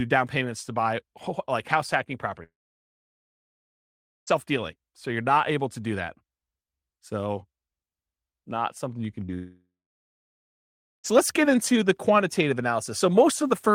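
From 2.43 to 4.33 s the speech cuts out in a long network dropout, likely a lost stream: a brief fading buzz, then about 1.75 s of flat, empty waveform before the speech resumes. At 9.26 to 9.30 s a short concealed packet loss leaves a 20 ms smear, visible as a thin vertical blur in the spectrogram. Straight after, from 9.34 to 11.06 s, a second long network dropout, likely another lost stretch, gives a short decaying tail and then about 1.3 s of silence, a blank band across the spectrogram.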